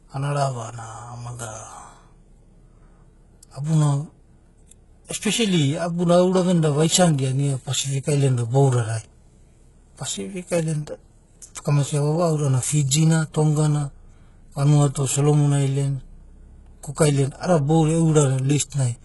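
Throughout, the speech has gritty, lispy s sounds and a metallic treble ending near 11.5 kHz, likely from heavy HE-AAC compression rebuilding the treble from copied lower bands.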